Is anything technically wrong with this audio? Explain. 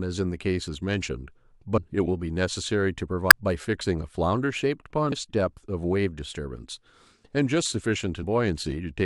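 Yes. Damaged data in a compressed stream strikes at 1.77 s, 3.30 s, 5.11 s and 8.22 to 8.24 s. Corrupted bytes make the decoder misread frames, lose sync and hunt for the next header, so each spot is a brief chirp or blip breaking into the speech.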